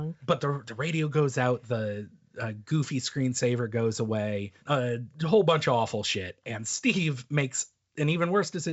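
No technical faults are audible.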